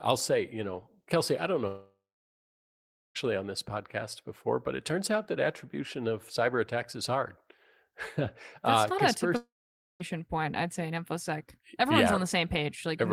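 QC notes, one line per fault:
1.67–3.17 s: long network dropout, likely cause. After "I don't", a fading buzz or hiss gives way to about 1.2 s of silence. Sound resumes at "on this podcast before" with roughly 1.5 s lost for good, unlike a brief packet-loss click.
9.37–10.02 s: long network dropout, likely cause. After "uh not a", the fill fades into about 0.5 s of silence. Sound picks up at "point I'd say in", skipping 0.64 s rather than stalling and catching up.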